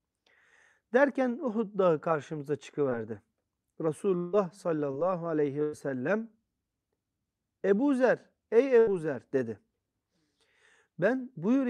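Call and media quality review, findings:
Short concealed packet loss at 2.89 s and 4.91 s. Brief smear in the audio, about 20 ms missing each time. Jitter buffer/decoder concealment extended the last sound, pitch-repeated or noise-shaped, then crossfaded back. Spectrogram: short stretched harmonics or smeared noise, small waveform discontinuity at rejoin.

Long network dropout, 4.17 to 4.35 s. Held buzz or hiss for about 160 ms that fades rather than breaking to silence; the audio resumes further on with that stretch gone. Likely network path outage, with the receiver's concealment bridging the entire gap. Spectrogram: frozen, decaying partials, no fresh onsets.

Burst of packet loss at 5.63 to 5.75 s (about 100 ms missing) and 8.79 to 8.89 s (about 80 ms missing). Several consecutive packets lost or late. The receiver extended the last sound as a buzz or hiss while attenuating it, then jumped ahead. 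Spectrogram: repeated pitch stripes or flat noise fading out, abrupt resume.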